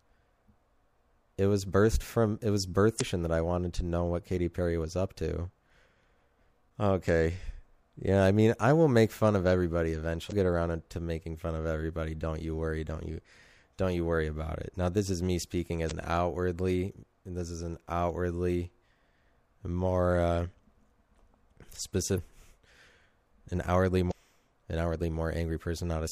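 Damaged data in a compressed stream causes brief decoder glitches near 2.97, 10.28, 15.87, 22.14 and 24.07 s, each about 40 ms long: short chirps, squawks, clicks or holes that appear as broadband vertical smears on a spectrogram.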